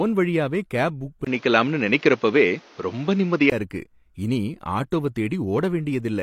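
From 1.25 to 3.52 s the speech turns duller, with nothing above 7 kHz, after a gap of about 20 ms. It likely comes from the input switching to a poorer device. Unlike a plain filter, the level also shifts by around 5 dB and a new noise floor appears, roughly 30 dB below the speech.

At 4.91 s there is pre-echo: a short hiss spread over about 14 ms leads into a sharp attack, which sounds smeared. The codec spread the attack's quantisation noise across its block. Unlike reverb or echo, the smear comes before the onset rather than after it.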